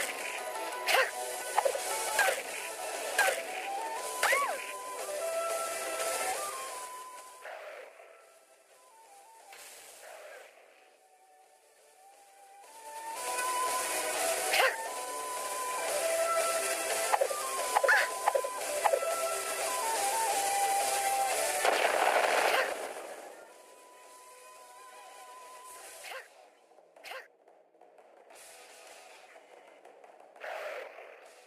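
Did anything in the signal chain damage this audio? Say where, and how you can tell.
Yes: zipper noise from unsmoothed gain in the buffer stage. Level moves in 3 dB steps at 6.23–7.60 s, 12.59–13.40 s and 22.66–23.47 s, ticking audibly.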